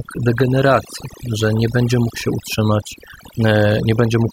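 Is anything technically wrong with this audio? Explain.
Yes. The speech carries overdone noise removal from start to finish. A noise reduction stage was set far too aggressively. It pushes individual frequency bands down hard whenever they sit close to its noise estimate. The quieter parts of the voice get caught and removed along with the noise. As a result, the background drops away and breaks up into twinkling, chirpy specks.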